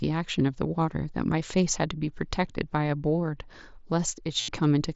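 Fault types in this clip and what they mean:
Concealed Bluetooth headset packet loss: from 4.41 to 4.48 s, about 75 ms of the speech turns into a steady buzzy tone at full level, with a slight warble as the real signal returns. A run of headset packets went missing, which fits roughly ten consecutive frames, and the receiver filled the gap by repeating the closest-matching recent stretch of the waveform over and over.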